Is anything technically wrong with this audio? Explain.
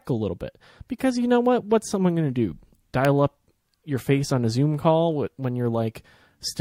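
Yes. An electrical switching spike lands at 3.05 s, between "someone going to do" and "up your face on". A nearby switch, motor or static discharge likely arced, and the audio line picked it up as a single sharp snap over the speech, peaking around -10 dBFS.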